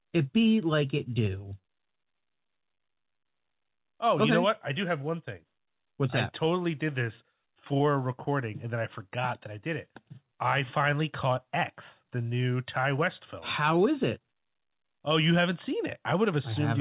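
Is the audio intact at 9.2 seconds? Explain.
Yes, the speech at 9.2 seconds is intact, with no fault at that moment, only the band limit of the call path, which leaves nothing above 4 kHz.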